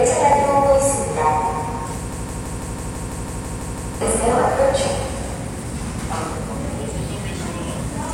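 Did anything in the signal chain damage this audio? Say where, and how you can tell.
Yes. Regular clicks recur every 1.76 s from 0.33 to 7.39 s, likely clock drift buffer slips at the driver or buffer stage. About 70 samples are dropped or repeated each time, which fits a clock mismatch of several hundred ppm. Random dropouts would not keep this steady spacing.

From 2.12 to 4.01 s, a 165 ms fragment repeats exactly eleven times back to back. This broken-record loop likely comes from a playback or stream stall. Unlike echo, nothing decays, and the intended sound for that span is lost.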